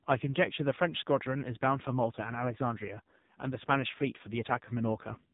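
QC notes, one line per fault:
Throughout: AMR narrowband mobile codec. The speech is cut off above 3.8 kHz and sounds heavily buzzy and synthetic. A vocal-tract model driven by a few pulses per subframe rebuilds it from very few bits, which fits the 5.9 kbps mode.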